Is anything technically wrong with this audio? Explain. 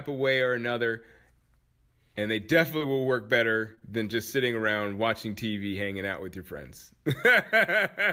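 Yes, there are a few network hiccups in this speech. Short concealed packet loss hits at 2.77 s, just before "will work", and again at 3.75 and 3.79 s, between "will work" and "than just sitting". About 40 ms and then two 20 ms chunks never arrived, so the decoder stretched the preceding sound over the holes. You hear brief smeary wobbles.

There are also lost packets rebuilt from error correction, at 2.81 s (20 ms), 3.67 to 3.73 s and 4.59 to 4.65 s (40 ms each, which fits two packets apiece). The next packets carried low-bitrate backup copies, so nothing drops out, but those moments sound rougher and noisier.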